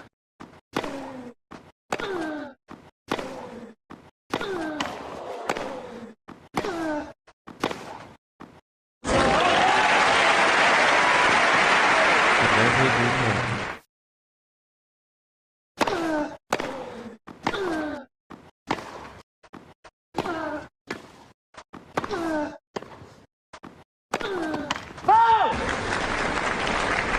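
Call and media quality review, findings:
No audible faults found in this recording.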